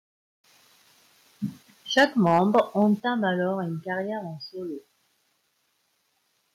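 A speech recording with microphone overload from 1.97 to 2.6 s: the loudest syllables are flattened and carry a harsh, crackling edge, with a few percent of samples clipped. The likely cause is input gain set roughly 5 dB above the converter's ceiling. The microphone volume is also stepped down twice: voice and background drop suddenly by about 3 dB at 1.99 s, right as the distortion begins, and again by about 7 dB at 3.00 s, which points to the call software cutting device input gain after detecting the clipping.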